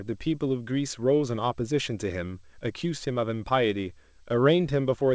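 Nothing goes wrong here: the speech just comes over an ordinary call link, with the sound stopping at 8 kHz in the way a G.722-style wideband codec would leave it.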